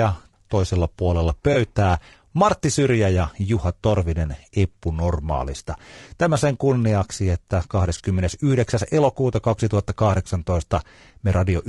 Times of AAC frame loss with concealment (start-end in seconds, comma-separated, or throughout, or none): 1.53-1.57, 7.97-8.01